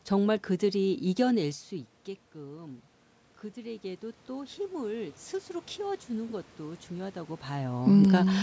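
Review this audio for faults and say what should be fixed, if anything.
From 5.75 to 7.85 s there is an automatic gain rise: the gain control judged the input too quiet and lifted it by about 4 dB over two seconds. Unlike the talker moving around 7.0 s, the room noise swells along with the speech. Prevent it by capping the AGC's maximum gain or slowing its rise when the level dips briefly.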